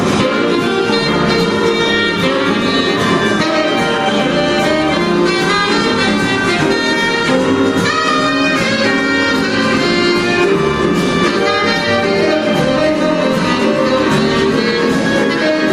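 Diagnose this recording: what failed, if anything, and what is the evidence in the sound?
Nothing failed: the signal shows no technical fault at any stage of the chain, from capture and conversion through processing, transmission, storage and playback.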